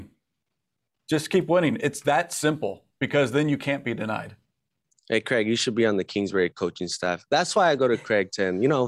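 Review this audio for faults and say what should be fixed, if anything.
No faults turn up in this audio, so nothing needs to be fixed.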